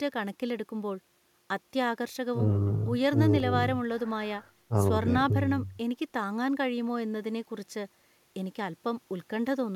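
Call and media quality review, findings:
Block of digital silence at 3.40 s: output buffer likely not filled in time, 0.73 ms of samples zeroed, hard edges produce a single tick in the speech.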